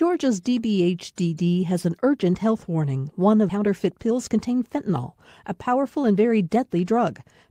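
At 3.49 to 3.51 s the speech jumps abruptly forward with no silence, as about a second of audio is lost. This skip ahead happened because that stretch was dropped in transit or by an overflowing jitter buffer, splicing the two sides almost directly.

From 3.53 to 4.99 s the speech sounds hurried at unchanged pitch, running about 17% fast, and again from 5.46 to 7.24 s at about 8% fast. This jitter buffer speed-up comes from the receiver trimming short pitch-period pieces, around 0.3 s and 0.15 s in total, to shed excess delay.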